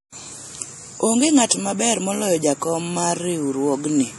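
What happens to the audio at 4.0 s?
At 4.0 s, as across the whole speech clip, the sound is watery and swirly, with metallic chirps on s sounds and smeared attacks, most likely from MP3 compression at a low bitrate, around 48 kbps. Short of bits, the encoder cuts the treble and zeroes weak frequency lines that flicker from frame to frame.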